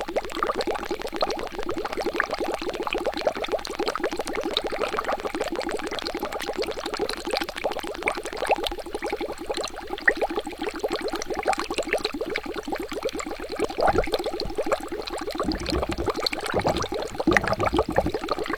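A recording of everyday sounds with two separate problems. From the very start to about 8.73 s there's a train of clicks: sharp, near-identical ticks at a steady 13 per second, about 150 in all, peaking roughly 15 dB above the sound itself, so they poke through the quiet stretches too. That regular, machine-like pacing most likely comes from interference from nearby equipment or a faulty connection or power supply injecting a pulse on a fixed cycle. On top of that, there's damaged data in the compressed stream at 1.04 to 1.07 s, 2.74 to 2.77 s, 5.46 to 5.49 s, 10.61 s and 13.65 to 13.68 s. Each is a brief chirp or blip lasting about 30 ms, apart from the one at 10.61 s, which is shorter. Corrupted bytes throw the decoder off, so it garbles or drops those frames and hunts for the next valid frame header.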